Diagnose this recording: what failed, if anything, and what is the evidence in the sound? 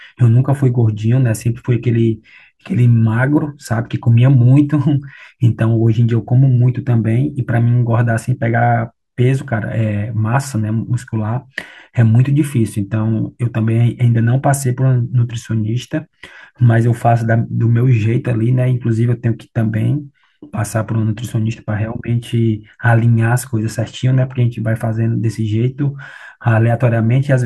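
Nothing in the recording points to a failure at any stage of the chain. The speech carries through with no audible event that would call for a diagnosis.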